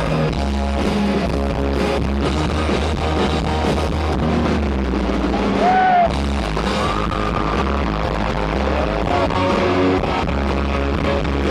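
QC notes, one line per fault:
No faults found. Nothing in the audio calls for a QC entry.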